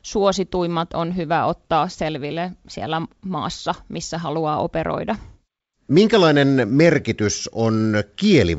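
No technical faults are audible.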